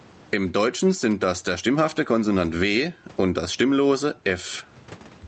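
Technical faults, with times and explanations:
Throughout, gain pumping: loud and soft parts are pulled closer in level, a swing of roughly 15 dB. That's likely a mic gain set far too high with a fast limiter clamping it, which squashes the dynamics.
1.02 to 1.98 s, GSM signalling bursts: a galloping dit-dit-dit of short buzzes at 217 Hz, sitting well below the speech. A nearby 2G phone's signalling bursts are being rectified by the audio circuitry and turned into that buzz.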